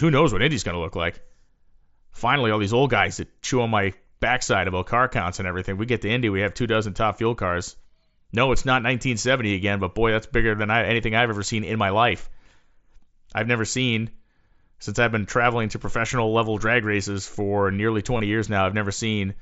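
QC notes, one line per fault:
13.39 s, dropped samples: a single sample or so likely went missing from the stream, so the waveform jumps straight from one value to a later one. The gap is far too brief to remove any speech and comes through as one sharp click.
18.18–18.20 s, concealed Bluetooth headset packet loss: 22.5 ms of voice packets from the mSBC headset link never arrived, which fits a short run of about three frames. The receiver patched the gap by repeating the best-matching recent stretch of waveform, giving a brief buzzy hold.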